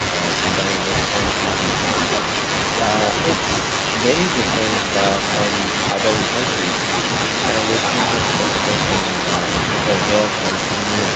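Speech over a call with a likely echo leak: a loudspeaker's echo canceller let its own microphone pickup return down the line, so throughout, 0.0 to 11.15 s, a delayed copy of one voice comes back 226 ms later, about 5 dB quieter.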